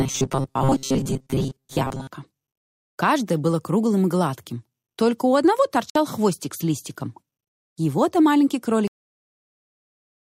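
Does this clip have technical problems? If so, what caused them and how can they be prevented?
Yes. From 0.01 to 2.07 s the sound turns into a rigid metallic buzz at 134 Hz, robotic sound from repeated short buffers. The likely cause is that audio arrived too slowly, so a roughly 7.5 ms slice was replayed over and over in place of most of the real material. On a spectrogram this shows as evenly spaced horizontal harmonic lines at multiples of 134 Hz. Keeping the audio pipeline fed, with a larger buffer or less processing load, prevents it.

At 5.90 to 5.96 s there is a Bluetooth stall: the sound drops out for 55 ms and then resumes. This is likely interference delaying wireless packets until the headphone buffer emptied. The waveform shows a short flat gap, and the spectrogram a blank vertical strip. Reducing interference or keeping the devices closer together prevents it.

At 8.88 s the audio has a cut-off end. 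It stops mid-sound and falls straight to digital silence with no decay, because the final buffers were never written out. The waveform ends abruptly in a flat line, and the spectrogram goes dark with no fading tail. Flushing all pending buffers before closing the recording or stream prevents it.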